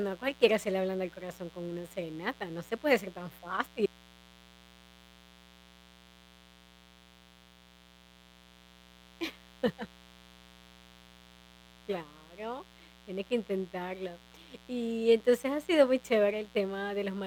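A steady, raspy mains buzz runs under the speech from start to end, about 25 dB below it, from sharp switching spikes on a 60 Hz supply.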